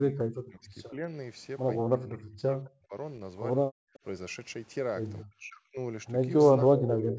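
From 0.0 to 1.13 s the talker's speech is pulled down in pieces, sinking by roughly 40 dB at its deepest. This is speech suppressed in double talk, likely from an echo canceller that could not tell the near talker apart from loudspeaker echo while both sides were active, and so attenuated everything. The same dipping and chopping returns from 1.83 to 2.95 s, again by around 40 dB.

From 3.67 to 3.94 s the room sound drops away sharply, by about 40 dB, for roughly a third of a second before recovering. This is background gated by the echo canceller. The canceller clamped the microphone hard while the far end's loudspeaker was playing, and the ambience disappears until the gate releases.

At 3.94 and again at 5.2 s a faint delayed copy of the voice slips through, trailing the original by 193 ms. This is an echo leak. The echo canceller on the loudspeaker side likely failed to remove all of what its microphone picked up, and the residue was sent back. 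It is a short scrap, very quiet at the first point and somewhat louder at the second.

Double-talk suppression recurs from 5.29 to 5.77 s, dropping the speech by roughly 40 dB. From 6.63 s to the end of the clip the dips are shallower, about 20 dB. Throughout, the band stops at 8 kHz from the call microphone processing.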